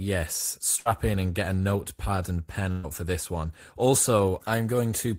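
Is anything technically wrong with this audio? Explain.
Yes, there are two bursts of packet loss in this speech, at 0.79 to 0.88 s and 2.71 to 2.86 s. Consecutive packets arrived too late or not at all, so the receiver stretched the last sound for 60 ms and then 120 ms while fading it. The speech then jumps ahead, with that same span missing.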